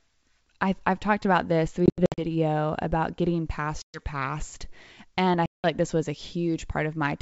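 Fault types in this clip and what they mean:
Packet loss on an ADPCM call: lost packets leave hard-edged silent gaps, flat in the waveform and blank in the spectrogram, then slightly distorted speech while the decoder resyncs.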